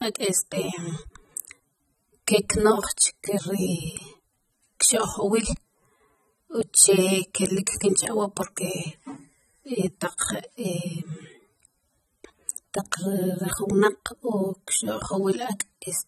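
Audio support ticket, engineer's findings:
Low-bitrate audio saved at a high bitrate, throughout the speech, 0 to end. Symptom: hard spectral ceiling, nothing above 13.1 kHz, with thin top end. Likely component: upstream encoder at a very low rate, consistent with roughly 24 kbit/s AAC, then re-wrapped as 192 kbit/s MP3. Mechanism: first codec discarded the detail, and the higher-rate re-encode preserves the damage without restoring it.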